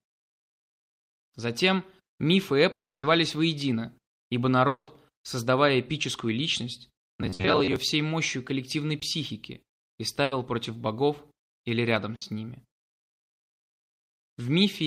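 Long network dropouts, likely causes of the gaps at 2.71 to 3.05 s and 4.67 to 4.89 s, remove about 320 ms and 200 ms of audio. Each time the receiver stretches the last sound into a fading buzz or hiss, then leaves near-silence (about 300 ms and 100 ms) before resuming further on. Robotic sound from repeated short buffers runs from 7.09 to 7.76 s. About half of that stretch is the same slice of audio played again and again, forcing a rigid metallic buzz near 94 Hz, which fits a buffer of roughly 10.7 ms. Bursts of packet loss at 7.33 to 7.41 s, 10.23 to 10.33 s and 12.15 to 12.23 s cut out 60, 80 and 60 ms. The receiver holds and fades the preceding sound across each hole, so each one sounds like a brief held buzz or hiss with a skip. Short concealed packet loss at 8.99 to 9.03 s drops 20 ms. The decoder bridges it by extending the prior sound and blending back, leaving a small smear or wobble.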